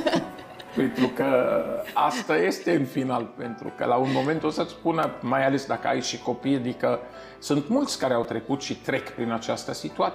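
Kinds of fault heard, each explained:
Repeated buffer: the playback device ran short of fresh audio and replayed its last block instead, a block of about 5.8 ms, which fits a 256-sample buffer. At 5.03 s the block plays one extra time, and at 8.24 s two extra times, each repeat butting hard against the next. Because the block is so small, these show as brief clicks or a tiny buzz rather than a stutter, with about 5 ms and then 10 ms of audio skipped.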